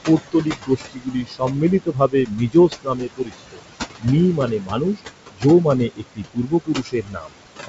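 It's a speech clip with noise suppressor artifacts running all the way through. The room noise, only about 11 dB under the speech, gets pulled down by about 19 dB between phrases and then climbs back under the talking, so the residue pumps. On top of that there's speech cut by the noise suppressor: it mistakes parts of the voice for noise and ducks them by about 17 to 22 dB at 0.06–1.62 s, 1.8–3.63 s, 4.37–5.01 s, 5.31–5.45 s and 5.89–7.37 s. In the longer stretches, around a second of speech in each sounds swallowed or faint. The bandwidth stops near 7.7 kHz, which fits wideband G.722 telephone coding, probably in its full 64 kbit/s mode.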